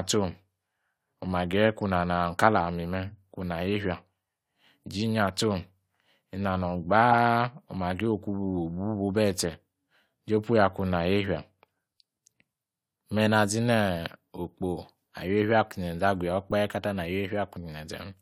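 At 7.11 to 7.14 s and again at 16.51 s, between "zenze agu ya" and "katar na", a corrupt frame decoded yields a brief chirp, squeak, blip or burst of noise: flipped bits misdirect gains, scattering energy off-frequency. The first, one frame, peaks near -10 dBFS; the second, about two frames, near -25 dBFS.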